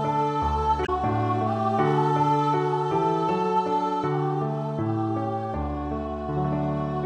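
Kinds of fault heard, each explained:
Damaged data in a compressed stream: a brief disturbance breaks through the sound from about 0.82 to 0.89 s, lasting roughly 70 ms. At that point part of the encoded stream is corrupt. The decoder misreads the affected frames, loses synchronisation and hunts for the next valid frame header. What plays during that gap is not the original signal.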